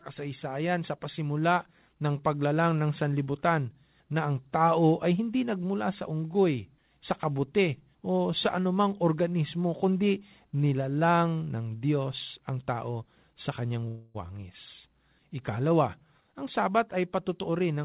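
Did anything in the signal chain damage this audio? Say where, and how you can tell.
Yes. From 13.88 to 14.28 s the speech stops moving forward and the last sound is stretched into a fading buzz or hiss for about 264 ms. It then resumes exactly where it left off, with nothing skipped. That is a call audio freeze at the network and jitter-buffer stage. Packets were likely held up in transit, the buffer ran empty, and the receiver extended what it already had, so everything afterwards arrives about 264 ms later.

From 15.98 s to the end, the speech sounds hurried, running at roughly 107% of its normal rate with the pitch unchanged. This is a jitter buffer speed-up. The buffer held more audio than its target. The receiver then cut out short slices of one or a few pitch periods, over and over, removing about 150 ms in total to win back that delay. The narrow band, with nothing above 4 kHz, comes from the G.711 A-law call path.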